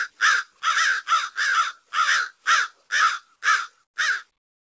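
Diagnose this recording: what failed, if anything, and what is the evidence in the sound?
From 3.84 to 3.96 s the background is replaced for 120 ms by a steady, featureless hiss about 15 dB quieter. This is likely comfort noise in place of the background, generated at the receiver after the sender's discontinuous transmission stopped sending audio.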